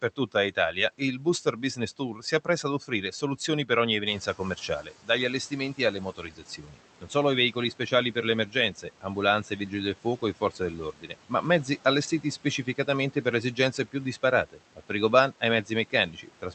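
Speech cut by the noise suppressor runs from 0.02 to 3.7 s, 4.26 to 11.31 s, 12.22 to 13.94 s and 14.52 s to the end. The suppressor mistakes soft consonants and word endings for noise and pulls them down by as much as about 12 dB (about 11 dB in the last stretch), so they sound swallowed. This adds up to roughly 0.7 s in the first span, about a second in the second and a fifth of a second in the third.

The noise suppressor catching up, from 4.06 to 4.91 s: the room noise jumps by about 11 dB near 4.0 s, and the suppressor's noise estimate lags. The noise comes through with less reduction at first, then sinks by about 9 dB over 850 ms as the estimate adapts.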